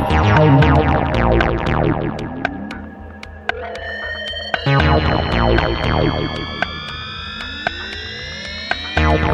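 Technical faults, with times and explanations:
1.02 to 1.59 s, CD scratch ticks: Five short ticks cut into the music, roughly seven per second. Each is only a few milliseconds long. A scratch on the disc spoils more data than error correction can rebuild. The damaged spot passes the laser once per turn, so the faults repeat at a steady rate. The player fills in or mutes the missing samples each time. That brief patch is what is heard as a tick or tiny gap.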